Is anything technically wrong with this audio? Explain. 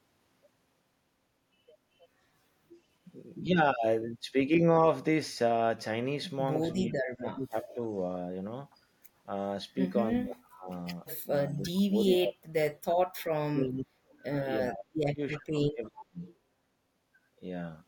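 Yes, there are two related problems, both pointing to an echo canceller struggling on a speakerphone call.

First, speech is suppressed in double talk from 6.77 to 7.79 s and again from 10.21 to 16.19 s. The likely cause is that both ends talked at once and the canceller couldn't separate its own talker from the loudspeaker echo, so it clamped down on everything. The voice dips by as much as about 35 dB, for roughly a second the first time and around four seconds in total across the longer stretch.

Second, there's echo leak at 7.69–7.74 s, 11.49–13.21 s, 14.12–14.23 s and 15.87–16.27 s. What you're hearing is a copy of the voice coming back 333 ms late. It's most likely from the loudspeaker end, where the canceller didn't scrub out everything its mic picked up and sent the leftover back. It sits about 20 to 35 dB under the main speech. The 11.49 s stretch is the long one, and the short bits at 7.69 and 14.12 s are just scraps.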